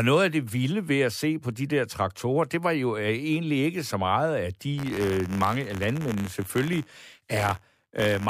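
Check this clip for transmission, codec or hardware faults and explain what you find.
One fault is present: buffer tearing from 4.77 s to the end at 8.30 s. The write and read positions of the playback ring buffer have slipped and now cross inside every period. A small sliver of each buffer carries audio from about 20 ms earlier, spliced in with hard joins on both sides. Over the speech this produces a continuous robotic buzz at 86.1 Hz, which fits a 512-sample buffer.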